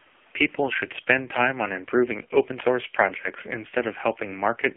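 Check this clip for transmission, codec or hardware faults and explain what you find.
One fault runs through the whole clip: the speech sounds buzzy, thin and synthetic throughout, boxed into a band of roughly 250 Hz to 3.4 kHz. This is AMR narrowband mobile codec damage. The heavy coding suggests a low rate near 5.9 kbps, rebuilding the voice from a vocal-tract model and sparse pulses in each 5 ms.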